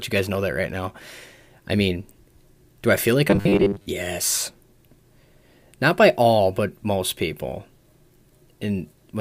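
From 3.30 to 3.86 s the speech turns into a rigid, metallic buzz at 100 Hz. This is robotic sound from repeated short buffers. Audio likely arrived too seldom, so a 10 ms slice was looped through most of that stretch, skipping the real signal.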